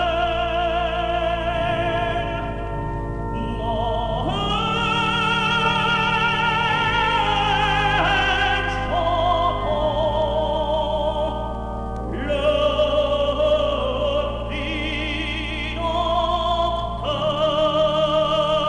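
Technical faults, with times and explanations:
No technical faults can be heard anywhere in the signal, which stays continuous with no audible disturbance to its waveform.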